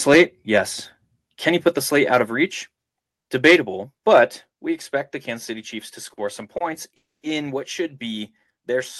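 From 0.10 to 0.22 s the input is likely driven past the converter's limit, which is a microphone overload: peaks run about 5 dB over full scale and around a tenth of the samples are flattened, giving the opening syllables a harsh, crackling edge.

At 0.17 s, during that overload, the call software steps the microphone volume down by about 2 dB. It steps it down again by about 3 dB at 2.25 s and by about 4 dB at 4.5 s, just before "we expect the". Each time, speech and background drop together in a sudden step, likely from the automatic gain control reacting to the loud input.

Between 6.13 and 6.19 s, and again between 6.57 and 6.62 s, a packet arrives late and the jitter buffer empties. Each is a short stall from a late packet. The receiver holds the last sound for 40 ms and then 30 ms before carrying on, so nothing is lost, but a sound lingers with a faint buzzy smear.

From 6.96 to 7.25 s, a call audio freeze, likely caused by packets held up in transit, leaves the buffer empty for 270 ms. 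The last sound trails off briefly, then about 210 ms of silence follows before the audio resumes at "what should be", with nothing missing but a gap inserted.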